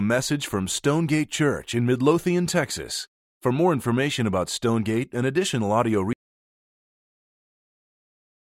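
Right after "and additional audio", at 6.13 s, the speech drops out to dead silence and stays that way to the end, about 2.4 s. There's no room tone at all, so the input was likely lost while recording carried on.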